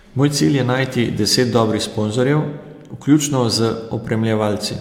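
A speech clip with a single bit error spike at 1.58 s: a sharp, broadband tick lasting two samples and peaking at about -22 dBFS. A flipped bit briefly throws the sample value off by a power of two, unrelated to the speech content.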